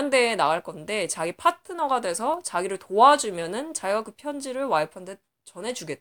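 No technical faults are audible anywhere in this speech recording.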